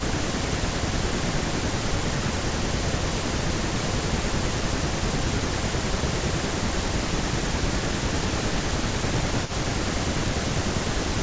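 At 0.07 to 0.42 s the level dips by about 15 dB for roughly a fifth of a second. This is speech suppressed in double talk. The likely cause is an echo canceller that heard both sides at once and turned everything down. From 1.2 to 7.19 s it happens again, harder. Drops reach about 20 dB, and around five seconds of sound is thinned or chopped into pieces.

Inside that stretch, echo leak appears. A brief scrap at 3.46 to 3.50 s is a delayed copy of the voice, 227 ms late. It sits about 20 dB below the speech. One side's loudspeaker echo likely slipped past its canceller and came back. A longer piece follows at 4.76 to 5.62 s, at the same delay and level. From 6.17 s to the end the echo runs louder, about 15 dB down.

From 7.75 to 11.11 s the suppression returns. Dips of about 15 dB break up roughly three seconds of sound. The call's microphone processing leaves nothing above 8 kHz.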